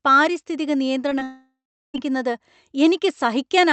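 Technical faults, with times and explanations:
1.09–1.13 s and 1.19–1.23 s: short concealed packet loss. About 20 ms of speech failed to reach the decoder each time, so the receiver extended the preceding sound for under 20 ms before blending back, leaving two brief smears close together.
1.23–1.96 s: long network dropout. Roughly 0.7 s of speech is missing, likely because packets stopped arriving. The receiver first continues the last sound as a fading buzz or hiss, then leaves near-silence for about 0.37 s, and speech resumes with the lost part absent.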